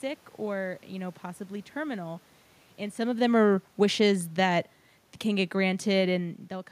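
From 3.0 s to 4.67 s, the automatic gain falls. The control judged the input too loud and pulled its gain down gradually, by about 3 dB. The speech sinks over that stretch, and the room noise sinks with it. That shared drop marks it as a gain change, not the talker moving, which is also heard around 3 s and 6 s. The lower level settles just before "can get".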